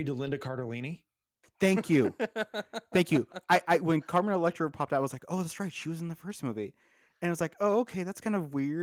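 Nothing in the speech stands out as a technical fault; it comes through Opus voice compression in hybrid mode at 24 kbps, which keeps the full band and leaves only light coding traces.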